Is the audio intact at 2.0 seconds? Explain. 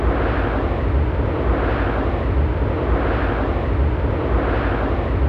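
Yes, at 2.0 seconds the audio plays through intact, with no dropout, click, distortion or other fault audible at that point.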